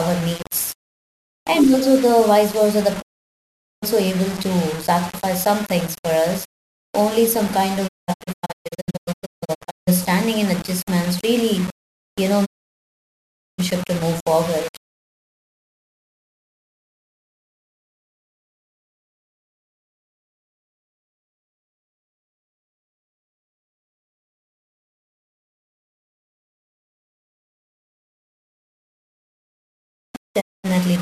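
Throughout the speech a grainy, gritty distortion rides along with the sound and roughens the quieter syllables. This is likely low bit depth without dither, with rounding to about 5 bits that leaves error roughly 20 dB below the signal. At 3.00 s, after "the vice versa the", the audio fades to silence within 20 ms until 3.84 s. This is a digital broadcast dropout, where the receiver mutes while frames are lost. From 7.87 to 9.89 s, after "some kind" and before "and adjustments really you", several short holes break the sound. From 12.44 to 13.60 s, after "adjustments really you know" and before "to move forward", the sound mutes again. A final brief gap falls at 30.40–30.66 s.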